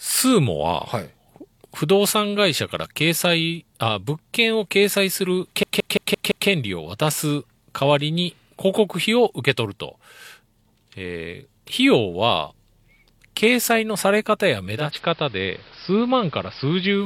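A system hang loop runs from 5.63 to 6.49 s. The playback side froze while the sound hardware kept replaying the same 170.67 ms stretch of its ring buffer, which fits an 8192-sample buffer. That piece repeats five times at 5.86 Hz, giving a rhythmic stutter.

Digital radio blending to analogue begins at 14.65 s and lasts to the end of the clip. The receiver lost its digital stream and cross-faded over 378 ms to the station's AM broadcast. Level drops by about 1 dB, and hiss enters roughly 25 dB below the signal.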